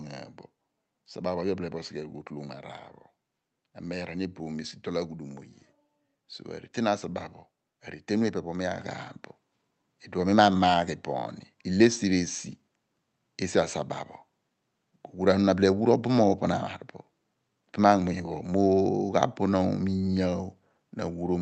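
At 8.79 s the microphone volume is stepped up. The call software judged the input too quiet and raised the device's input gain in a single jump of about 6 dB. Because the change happens before any processing, the talker and the room noise get louder together, with no fade. Through the call path the audio stays band-limited near 8 kHz, which points to Opus at a modest bitrate.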